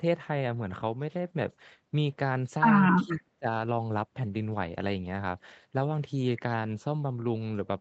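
A speech recording carried over an Opus call path, band-limited to 8 kHz. The far end's echo canceller likely let some loudspeaker pickup through, so an echo leak appears from 2.97 to 3.02 s: a brief, very faint copy of the voice, delayed by about 0.35 s. The canceller then likely misjudged the talker as echo during double talk and turned it down, so speech is suppressed in double talk from 3.04 to 3.21 s and from 3.39 to 3.47 s, dipping by roughly 15 dB and then roughly 25 dB.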